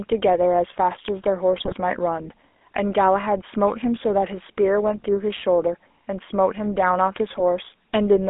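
From start to end the speech carries the buzzy, gravelly roughness of the GSM full-rate codec, consistent with the 13 kbps coder. The band sits between 250 Hz and 3.5 kHz, and the pulse-driven excitation model roughens the voice itself rather than simply dulling it.

GSM bit errors strike from 1.58 to 1.73 s and again from 7.30 to 7.41 s. Corrupted filter, pitch and gain values garble each affected frame into squawks and gargling pops. These bursts are sudden and brief, unlike the codec's steady roughness.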